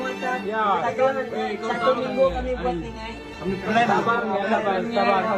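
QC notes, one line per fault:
No technical faults were found anywhere in the signal.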